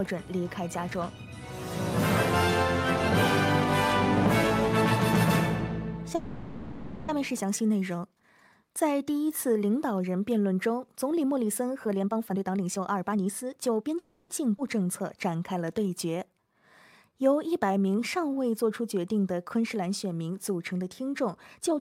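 From 6.15 to 7.11 s there is a call audio freeze: the last sound is carried on as a fading buzz or hiss for about 0.93 s, most likely because packets stalled and the jitter buffer ran dry. When the audio resumes it picks up exactly where it stopped, so nothing is lost and a gap is inserted instead. That is what separates it from a skip ahead, which loses material.

From 11.85 to 13.97 s a jitter buffer speed-up runs the sound at about 133% of normal speed while the pitch stays put, giving it a hurried feel. The receiver is trimming away pitch-period-sized slices repeatedly to shed roughly 0.7 s of surplus delay. Because the pitch never rises, this is not simply faster playback.

A second freeze follows at 13.99 to 14.33 s, again a fading fill of about 0.31 s with nothing missing, likely from another stall in delivery.

At 14.6 s comes a skip ahead. Roughly 0.3 s of audio drops out, and the two sides are spliced with only about 10 ms of fill. 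Unlike the freezes, there is no held tone here, only an abrupt jump forward in the material.

Two jitter buffer slow-downs come next, from 14.84 to 16.54 s at about 93% speed and from 17.09 to 18.36 s at about 90%. Repeated pitch periods add about 133 ms and 136 ms respectively, so sounds are stretched out at unchanged pitch. That repetition is what separates these from a freeze's decaying fill.

At the very end, from 21.58 to 21.80 s, a brief speed-up at about 134% removes roughly 70 ms.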